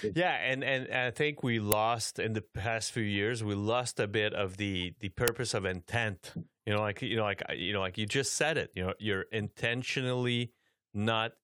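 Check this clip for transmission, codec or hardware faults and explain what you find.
Two faults turn up in the speech, both of the same kind: an uninitialised buffer, at 1.72 s (between "and I think we" and "in the past few") and at 5.28 s (between "bit of the the" and "of intent"). Each time, a block was played before audio had been written into it, so whatever was left in memory came out as samples. The result is a loud crack lasting about 2.9 ms, which fits a 128-sample block. Unlike a dropout or a plain click, it replaces the audio with a crack of leftover data rather than silence or a single spike.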